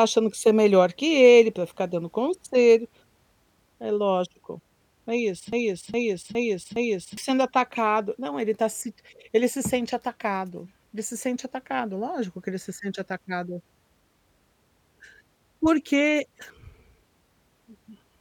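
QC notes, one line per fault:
5.53–7.17 s broken-record loop: a 0.41 s fragment of speech plays four times back to back with identical repeats, likely from a stalled player or stream resending its last buffer. Unlike a decaying echo, each pass is identical, and the speech meant for those seconds is gone.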